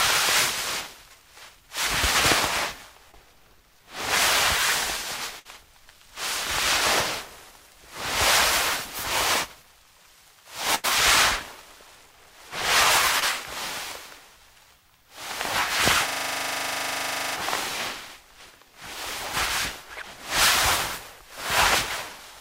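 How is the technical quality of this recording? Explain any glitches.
The technical quality is marred by network dropouts and one system freeze.

Short concealed packet loss occurs at 3.11 to 3.15 s and again at 13.20 to 13.24 s. About 20 ms of data arrived too late each time, and the receiver filled roughly 17 ms and 21 ms by extending the preceding sound, then crossfaded back into the real signal. Each is heard as a tiny smear or wobble, and whatever brief detail fell in those gaps is gone.

A burst of packet loss appears at 5.39 to 5.47 s and at 10.75 to 10.86 s. Consecutive packets failed to arrive, leaving holes of about 60 ms and 80 ms. The decoder bridged them with 57 ms and 87 ms of synthesised continuation that fades as it goes, a held buzz or dying hiss. The sound then jumps ahead, with the lost stretch simply absent.

A system hang loop runs from 16.08 to 17.36 s. The machine or its driver stalled while the audio hardware kept replaying its ring buffer, so one 40 ms slice repeats 32 times. 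At a 25 Hz loop rate this comes across as a rapid mechanical stutter bordering on a buzz. About a second and a half of real audio never gets through before playback recovers.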